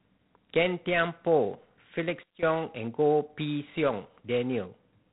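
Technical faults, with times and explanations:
Throughout, G.726 ADPCM: the speech carries a harsh, rasping hiss that rises and falls with its level, and nothing is heard above about 3.8 kHz. The codec sends only a few bits per sample, describing how each sample differs from a running prediction. When speech changes quickly, that coarse difference misses, and the error becomes grainy noise that tracks the signal. The damage is plainly audible, which points to the 24 kbit/s mode, three bits per sample.
2.23 to 2.43 s, sudden gain jump: for about 0.2 s, the speech and the background noise under it drop together by about 16 dB, then return. The level changes abruptly rather than fading, so the step is heard as a sharp cut in loudness. Because the noise floor falls with the speech, the change happened to the whole signal. The likely cause is a digital gain setting or bit shift applied from one sample to the next without a ramp.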